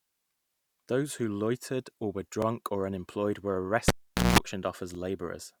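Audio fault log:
2.42–2.45 s and 4.95–4.97 s, overlapping chunks: the speech is handled in blocks of about 2.5 s, and each new block begins about 23 ms before the previous one ended, so that sliver plays twice. The first is just after "who loitered or were" and before "or unemployed were". It is heard as a brief stutter-click. The waveform shows a discontinuity with a repeated short segment, and the spectrogram shows a thin vertical broadband line at each join.
3.88–4.39 s, cable pulled and plugged in: after "or unemployed were" a live cable is pulled out, giving a sharp pop and then about 455 ms of near silence. During reinsertion only the tip makes contact for about 193 ms, producing a 60 Hz mains buzz before a second pop as the signal returns. The waveform shows a spike, a flat gap, a dense buzz block and another spike. The spectrogram shows stacked horizontal lines at 60 Hz and its harmonics between two vertical pop lines.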